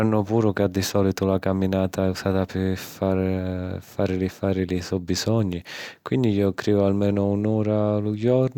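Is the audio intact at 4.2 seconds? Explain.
Yes, the speech at 4.2 s plays through cleanly, with no dropout, click, distortion or other fault at that moment.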